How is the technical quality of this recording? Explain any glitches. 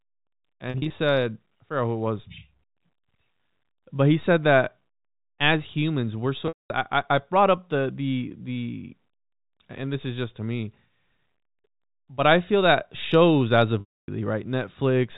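Three glitches are audible, all from packet loss with pitch repetition. The audio has the narrow telephone band of G.711 coding. Dropouts occur at 0.70 to 0.90 s, at 6.48 to 6.70 s, and at 13.80 to 14.08 s. The receiver loops the last pitch period to cover each gap. At 0.70 s, 120 ms drops out in short bursts over 200 ms, the longest 40 ms. That sounds like a brief buzzy hold. After "as humans we're so", 220 ms goes. After "feel that shows as", 280 ms goes. These longer gaps fade into silence, then speech cross-fades back, at the second before "I I brought up". The gap lengths fit 20 ms packets.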